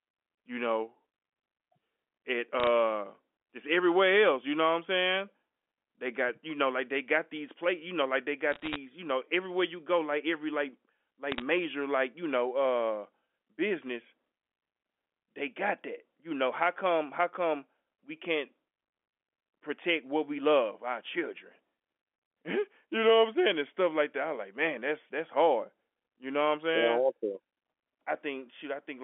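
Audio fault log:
2.60 to 2.67 s, 8.52 to 8.76 s, 11.32 to 11.42 s: bit errors on a digital phone line. Flipped bits each corrupt one logarithmically coded sample, giving sharp ticks and crackle, densest in the middle burst. The waveform shows isolated one-sample spikes; the spectrogram shows thin full-band vertical lines.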